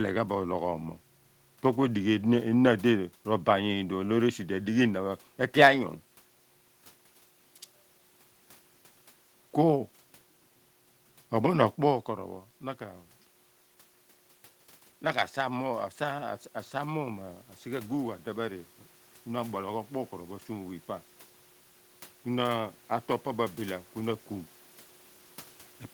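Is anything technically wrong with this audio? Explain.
Yes. Automatic gain rising, from 14.99 to 18.72 s: after the speech level reaching the microphone fell by about 11 dB, the gain control judged the input too quiet and raised its gain by about 4 dB over nearly four seconds, so the voice and the room noise swell up together.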